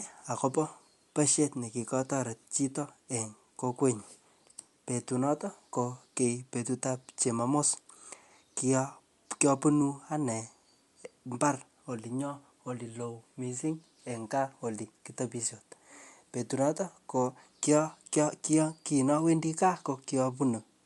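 Across the whole speech clip the sound has a breathy, grainy edge, and nothing is heard above 11.5 kHz. This is likely Bluetooth LC3 compression, its upper band thinned and noise-filled, which fits a 48 kbps stream using 10 ms frames.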